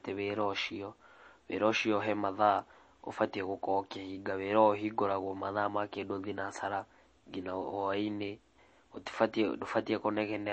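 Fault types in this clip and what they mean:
MP3 compression: the speech sounds watery and swirly throughout, with smeared attacks and nothing above about 8.3 kHz, likely from a low bitrate near 32 kbps. A spectrogram shows a hard ceiling at 8.3 kHz and weak components flickering on and off between frames.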